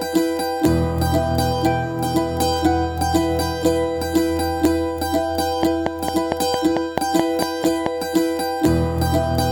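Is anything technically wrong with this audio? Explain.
Yes. From 5.63 to 7.87 s a train of clicks runs over the music: around ten similar pulses at a regular 4.48 per second, peaking about 15 dB above the music. This is likely interference or a faulty connection or power supply. Unlike random crackle, the clicks are evenly spaced and alike in shape.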